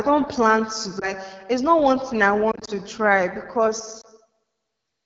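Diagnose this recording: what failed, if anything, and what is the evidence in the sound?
The codec stage is at fault: the speech is rough and raspy throughout, which fits AMR wideband (HD Voice) running at one of its lowest rates, probably 8.85 kbit/s.

Lost AMR speech frames on the network: brief warbly dips at 0.99 to 1.13 s after "don't plan to", 2.51 to 2.70 s after "not one thing I", and 4.01 to 4.06 s, where the decoder papered over missing frames.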